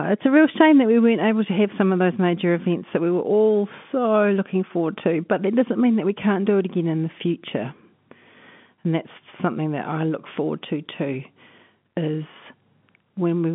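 Nothing in this speech recording stands out as a technical problem. It carries the narrow sound of G.711 telephone coding, with the speech confined to a line band of roughly 150 Hz to 3.5 kHz and nothing audible above about 3.7 kHz.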